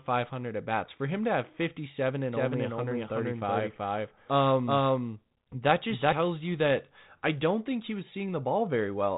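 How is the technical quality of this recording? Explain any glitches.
The recording has one clear fault: a doubled audio track. It runs from 2.33 to 6.13 s and starts just before "you that I don't". A second copy of the speech trails the first by roughly 400 ms, at about the same level. That copy is full-band, with no reverb or decay, so it sounds like two overlapping takes rather than an echo. It starts and stops abruptly. The likely cause is a second, slower capture path or an edit that left two copies out of step. The telephone-style band limit near 3.9 kHz comes from the G.726 coding.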